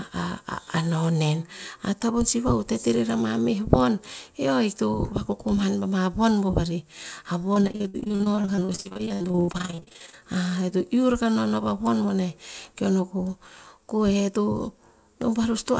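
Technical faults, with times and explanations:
7.54 to 10.23 s, repeated packet loss (robotic sound): speech packets kept going missing, dozens of dropouts up to 82 ms each. The receiver patched every hole by extending the last sound, so about 44% of this stretch is filler, heard as choppy, robotic speech.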